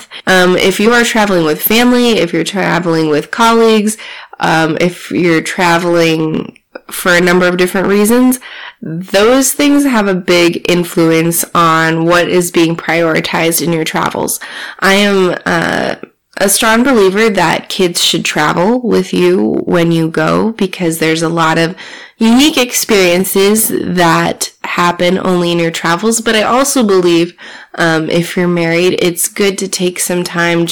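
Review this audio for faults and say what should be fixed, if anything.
Hard clipping throughout: the speech reaches a stage about 17 dB hotter than it can pass, so roughly a tenth of samples are cut flat, giving harsh fuzz on every loud syllable. To prevent it, lower the gain before that stage so peaks stay below full scale with some headroom.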